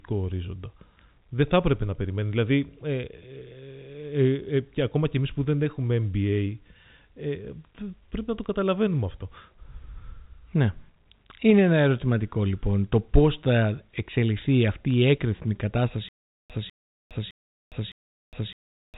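Bit errors on a digital phone line show up at 8.44 s, between "πρέπει να το" and "καταλαβαίνουμε αυτό", and again from 14.90 to 14.94 s, right after "πώς θα εξελιχθεί αυτή". The speech travels as 8-bit A-law G.711 samples, and a flipped bit corrupts a single sample. When a sign or high-order bit is hit, that sample leaps far from its neighbours and produces a sharp tick. The error rate is low, a small fraction of a percent, so each spot is brief rather than sustained crackle.

Stutter with silent gaps begins at 16.09 s and runs to the end of the clip. A 0.2 s burst of audio plays, then about 0.41 s of dead digital silence, and the same burst returns every 0.61 s, four times in all. This is likely a stalled player or stream that kept replaying its last buffered fragment on each retry and then ran dry, so the speech that should have filled those final seconds never arrives.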